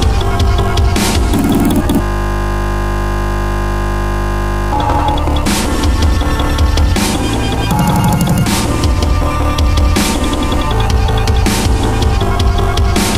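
From 2.03 s to 4.72 s the sound gives way to a steady, flat buzz with a pitch near 50 Hz. This is a system hang loop. The computer or its audio driver stalled and stopped supplying new samples, while the sound hardware kept replaying the same 20 ms stretch of its ring buffer. That stretch repeats roughly 135 times, and a loop this short blurs into a continuous buzz at its repeat rate rather than an audible stutter.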